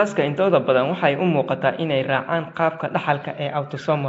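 From start to finish, the speech has likely passed through Nellymoser compression, the Flash-era microphone codec that codes short blocks at a fixed low bit depth and fills weak bands with noise instead of real signal. The damage is plainly audible: a rough, hissy halo around the speech and a smeared, underwater quality, with nothing above 7.7 kHz. The thin detail points to a bitrate around 32 kbps.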